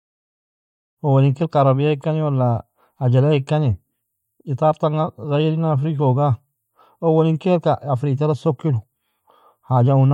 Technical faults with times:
none

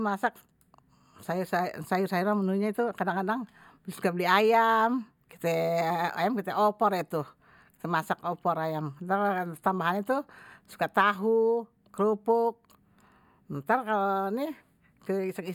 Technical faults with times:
none

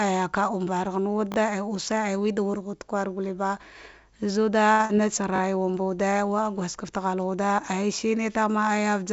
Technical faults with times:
1.32-1.36 repeated buffer
4.72-4.81 short stall from a late packet
4.85-4.91 short concealed packet loss
5.36-5.40 repeated buffer

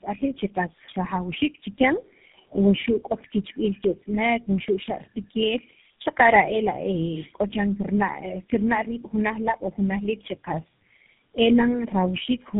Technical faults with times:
0.00-12.59 tandem speech coding

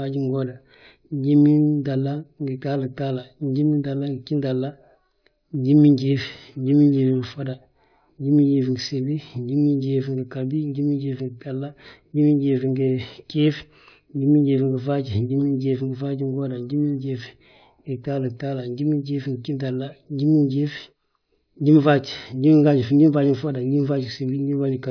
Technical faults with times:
none

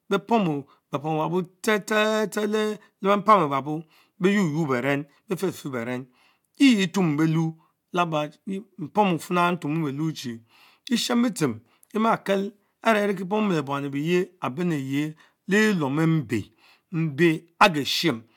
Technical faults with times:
none

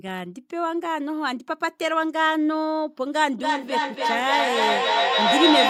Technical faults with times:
3.39-5.69 feedback echo between two devices

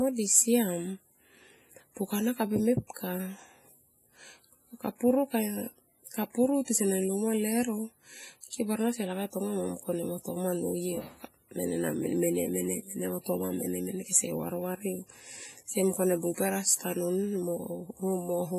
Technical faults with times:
0.00-18.59 WMA compression

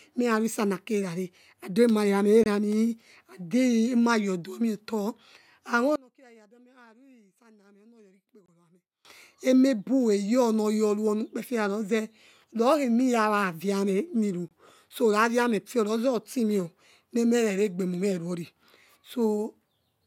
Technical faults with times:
2.44-2.46 gap at a join of encoded pieces
5.96-9.05 one channel inverted
8.46-8.48 gap at a join of encoded pieces
14.48-14.51 gap at a join of encoded pieces

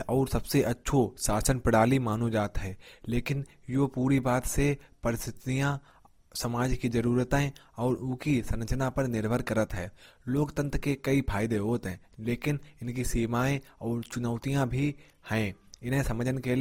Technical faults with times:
0.00-16.61 transcoding between lossy codecs

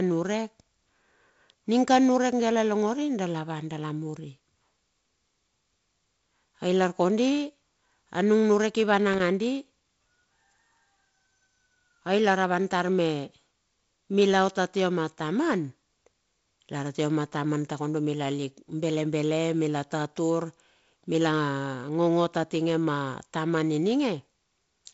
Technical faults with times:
9.13-9.20 loose connector crackle

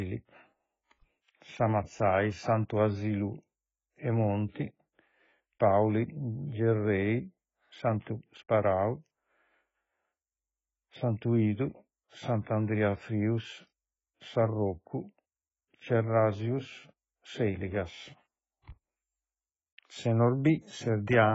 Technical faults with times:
0.00-21.34 AAC compression

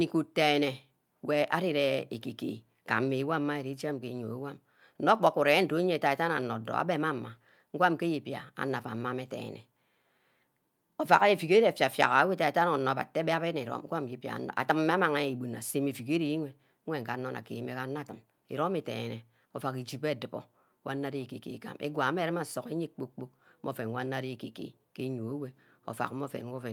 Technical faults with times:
none

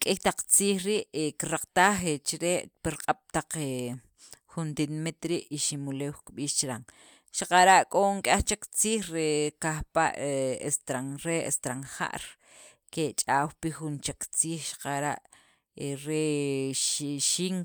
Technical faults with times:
none

